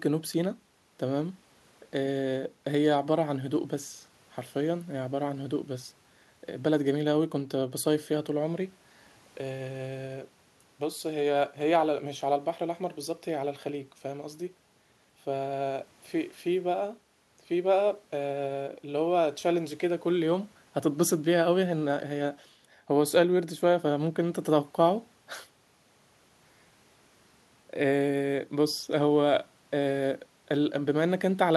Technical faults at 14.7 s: none

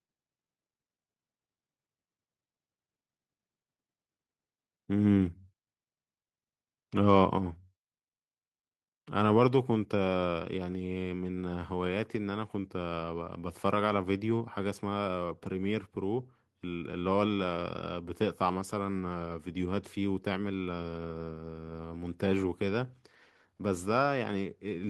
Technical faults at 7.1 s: microphone overload

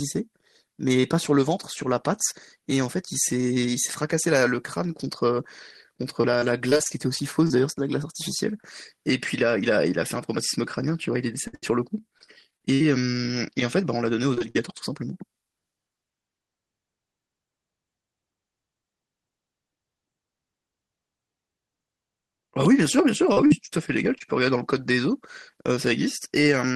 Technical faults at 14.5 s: repeated packet loss (robotic sound)

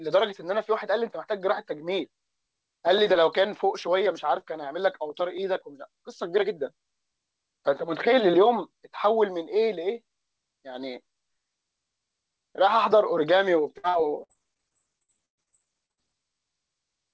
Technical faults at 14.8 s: repeated packet loss (robotic sound)

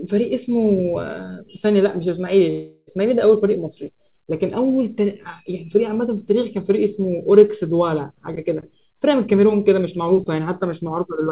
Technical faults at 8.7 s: none

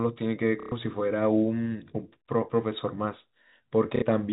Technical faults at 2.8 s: none

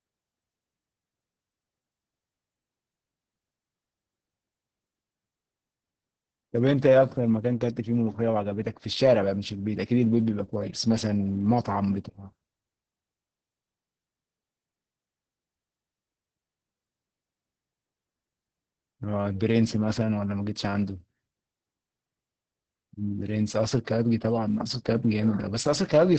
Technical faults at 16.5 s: Opus voice compression

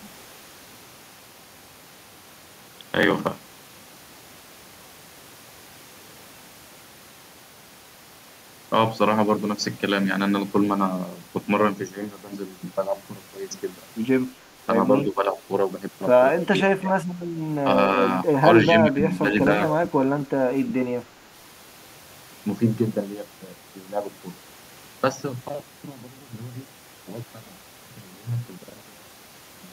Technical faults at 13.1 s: none

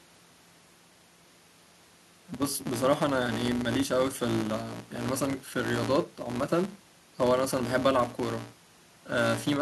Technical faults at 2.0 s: filter restarted on every block

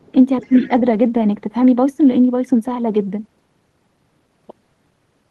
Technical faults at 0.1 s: speech suppressed in double talk

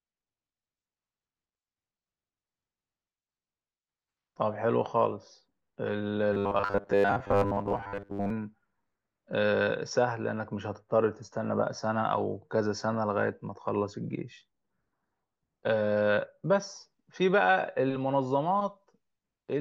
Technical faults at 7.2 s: robotic sound from repeated short buffers

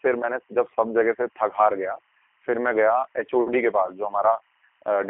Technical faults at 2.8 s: timecode bleed; G.729 codec

